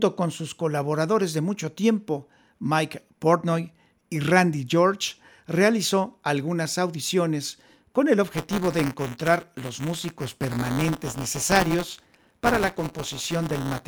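Speech clip with buffer tearing from 8.28 s to the end: a steady robotic buzz at 172 Hz, fitting a 256-sample buffer, where each period replays a small slice of audio about 10 ms old.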